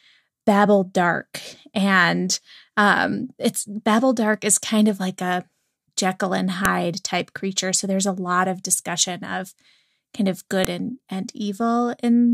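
At 6.65 s there's a sharp, loud snap cutting into the speech, and the same thing comes back at 10.65 s. That's a file header played as audio: the clip seems to have been stitched together from separate WAV pieces without stripping each piece's header, so those few dozen bytes get read as sample values. Each one lands as a single hard click at the join, no matter what the speech is doing at that moment.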